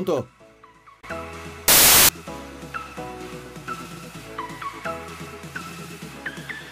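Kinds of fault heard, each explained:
Samples built from the wrong bytes: from 1.68 to 2.09 s the sound gives way to a burst of loud, harsh broadband noise lasting about 0.41 s. The reader has assembled each sample's bytes wrongly, off by one byte, in swapped order or with the wrong alignment, so the rapidly fluctuating low-order bits land in the most significant positions and dominate every value.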